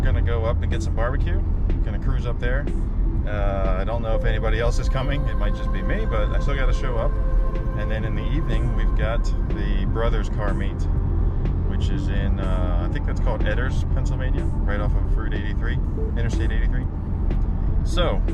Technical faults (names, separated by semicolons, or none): none